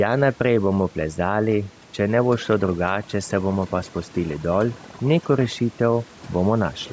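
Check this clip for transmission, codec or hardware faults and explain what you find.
Two processing faults run through the whole speech clip. Neither comes from transmission or a codec.

Overdone noise removal: Throughout, the gaps fall to near silence flecked with twinkling specks. A noise reducer set far too strong is cutting individual frequency bands whenever they sit close to its noise estimate, taking the quieter parts of the speech with them.

Gain pumping: Across the clip, the level swings by around 5 dB, leaving the speech squashed and flat in level. The likely cause is input gain set far too high, with a fast limiter or compressor clamping down on each peak. The room noise sits about 31 dB below the speech, and the call's microphone filtering stops cleanly at 8 kHz.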